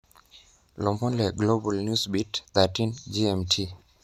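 Nothing goes wrong anywhere in this bit of speech, so there's no fault to point to at any moment.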